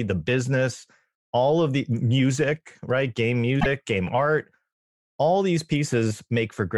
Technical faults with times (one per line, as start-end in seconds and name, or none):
3.57-3.66 damaged data in a compressed stream